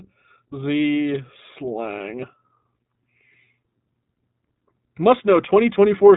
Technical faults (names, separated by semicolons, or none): iLBC codec